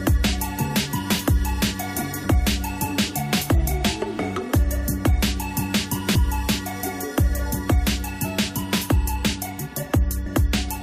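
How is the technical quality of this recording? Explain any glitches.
The recording has three brief glitches, all of the same kind.

Damaged data in a compressed stream occurs at 2.24 to 2.26 s, at 6.14 s and at 10.25 s. At each point part of the encoded data is corrupted, so the decoder misreads the affected frames, loses its place in the stream and has to search for the next valid frame header before playback can continue. Each event lasts only a few hundredths of a second and is heard as a short chirp or blip.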